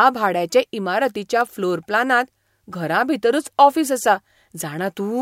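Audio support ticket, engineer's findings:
Electrical switching spike at 1.41 s, right after "भाड्याचे इमारतीच्या". Single sharp snap riding on top of the speech, peaking at about -15 dBFS. Likely cause: an arc from a nearby switch, motor or static discharge coupling into the audio line as a brief impulse. Probable component: the audio line picking up the arc.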